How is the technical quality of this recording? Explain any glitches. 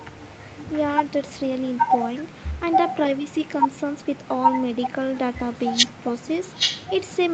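The recording's quality is held back by one persistent fault, an echo leak, heard over a call path whose audio stops at 8 kHz. From the start to the end of the clip, a delayed copy of the speech trails the original by about 0.82 s at roughly 10 dB lower. The likely cause is a far end playing the call on a loudspeaker, with its echo canceller missing part of what its microphone picked up and sending it back. On a waveform, speech has a fainter twin offset by that delay. A spectrogram repeats the same patterns shifted right and paler.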